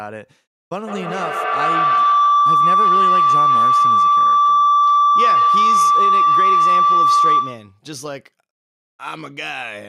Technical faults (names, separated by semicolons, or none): feedback howl